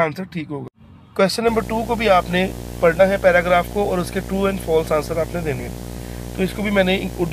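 At 0.95 s, compressed frames are skipped: the decoder drops about one frame, losing around 20 ms, heard as a brief jump ahead. From 1.47 s to the end, video or display buzz from screen or cable coupling adds a 60 Hz buzz with hash, roughly 10 dB below the sound. Further frame skips at 2.99 s (around 20 ms) and 5.59 s (a couple of frames, around 50 ms) give the same jumps.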